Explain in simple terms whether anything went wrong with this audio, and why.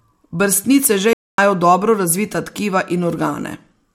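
At 1.13 seconds the speech suddenly cuts to silence for about a quarter of a second, then carries on at 1.38 seconds. That gap is a playback stall: the player most likely ran short of audio data, or got held up, and fell silent until it caught up.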